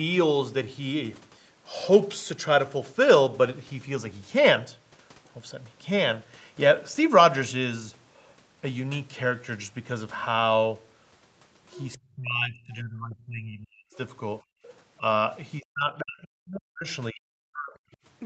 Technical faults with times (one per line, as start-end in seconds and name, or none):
11.72-11.94 other side's voice leaking through
11.97-13.92 speech suppressed in double talk
14.41-14.64 background gated by the echo canceller
14.99-15.04 speech suppressed in double talk
15.60-17.93 speech suppressed in double talk